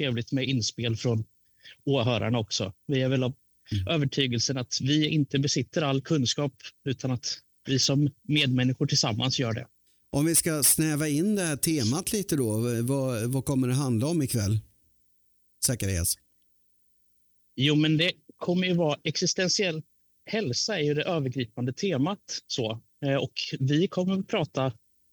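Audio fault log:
No faults heard anywhere in the audio.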